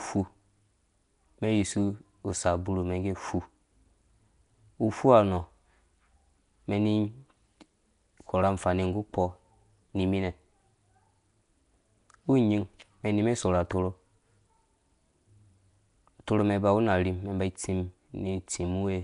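From start to finish the speech carries a rough, hissy halo and a smeared, underwater feel, with nothing above 10.6 kHz, which sounds very much like Nellymoser compression, likely from Flash's old microphone codec.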